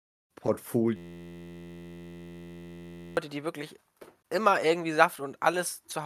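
From 0.96 to 3.17 s, a system hang loop recycles one 11.61 ms buffer. It buzzes steadily at 86.1 Hz until "die wirklich immer irgendwie".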